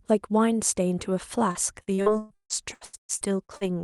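From 1.51 s to 3.68 s, repeated packet loss gives the speech a robotic sound. Fifteen gaps fall in this stretch, the longest 158 ms. Each gap is patched by stretching the previous sound. About 38% of the span is patched, so the speech turns choppy.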